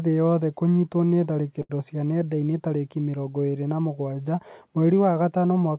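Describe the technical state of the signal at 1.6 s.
Just after "thĩ yothe kũnyitwo nĩ", from 1.62 to 1.71 s, there is a short stall from a late packet. The jitter buffer ran dry, so the last sound was stretched for about 74 ms before the speech resumed from the same point. Unlike a dropout, nothing is lost; the speech is only held longer and delayed.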